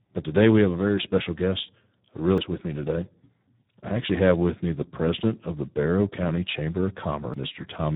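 Speech passed through the Speex codec at a low quality setting, which fits a bitrate of about 8 kbps. At that rate the codec has very few bits for the excitation signal that drives its vocal-tract model. The result is heavy damage throughout: the speech sounds hoarse and noisy, and nothing is present above 3.8 kHz, leaving a narrow, telephone-like band. Separately, there are two CD skips, at 2.38 s and 7.34 s, where the laser lost its track and landed on another turn of the disc's spiral. At each point the player mutes very briefly, a couple of milliseconds at the first and a few at the second. It then resumes from a different place on the disc, so each skip is heard as a small tick followed by an abrupt jump in the flow of the audio.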